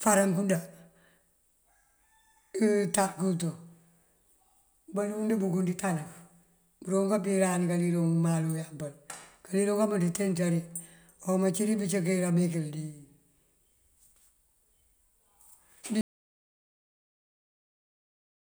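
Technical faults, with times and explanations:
16.01–18.40 s, audio dropout to silence: the speech stops abruptly mid-flow and the final 2.4 s are silent with no room tone at all. The likely cause is a lost input signal while recording continued writing silence.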